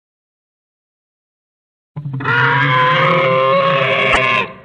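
Between 4.12 and 4.17 s, frames were likely cut from an MP3 stream, breaking the bit reservoir: the following frames reach back for borrowed data and decode another frame's bytes instead. The audio jumps ahead, with a garbled disturbance lasting about two 26.1 ms frames.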